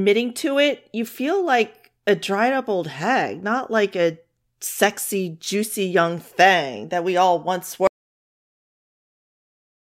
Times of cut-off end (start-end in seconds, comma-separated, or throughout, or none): 7.87-9.83